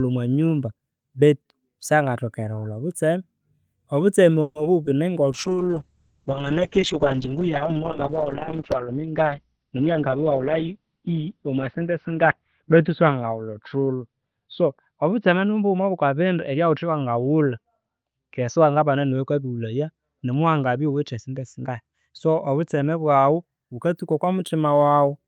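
At 4.41 s the sound stretches into a fading buzz for about 140 ms until 4.57 s, a call audio freeze likely caused by held-up packets draining the jitter buffer before resuming. From 4.83 to 4.94 s a short concealed packet loss leaves a brief smear where roughly 20 ms never arrived and about 10 ms was patched by extrapolation. From 5.32 to 23.49 s a call bitrate drop makes the audio rough and muffled, with bandwidth cut from 20 kHz to 6 kHz, consistent with the encoder falling from about 40 to 7 kbps. From 9.57 to 10.79 s a jitter buffer speed-up runs the speech 11 percent faster at unchanged pitch, trimming around 150 ms to shrink an overfilled buffer.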